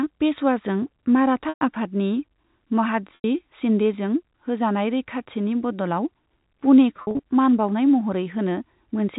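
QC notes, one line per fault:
1.49–1.61 s, 3.15–3.24 s (before "शिन्देजों होजानाय रैखाथिनि"), 6.97–7.19 s (before "मान बाउनाय"): packet loss with pitch repetition. Gaps of 120 ms and 90 ms, then 120 ms lost in scattered runs up to 50 ms, are bridged by repeating the last pitch period, giving a held, buzzy tone that fades before the audio resumes. The narrowband G.711 telephone band is audible underneath.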